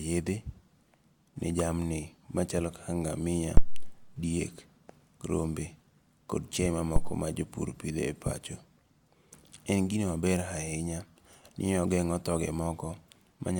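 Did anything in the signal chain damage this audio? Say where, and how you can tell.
Yes, at the analogue input: phantom power thumps at 3.57 s and 6.96 s, where a supply step passes through coupling capacitors, leaving deep thumps that decay in about 98 ms and 53 ms rather than sharp clicks.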